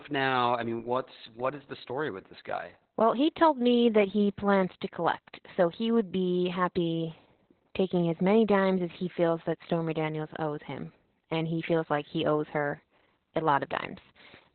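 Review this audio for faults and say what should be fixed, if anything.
Opus voice compression runs through the whole speech recording. Nothing survives above about 4.3 kHz, which points to narrowband SILK coding at a very low rate, around 8 kbps. Starved of bits, the linear-prediction coder renders the excitation coarsely, so the speech sounds muffled, hoarse and slightly robotic. On a spectrogram there is a flat ceiling near 4.3 kHz with empty space above it, and the harmonics below look smeared and blocky, consistent with 20 ms frames. To prevent this, encode at a higher bitrate so Opus keeps wideband or fullband audio.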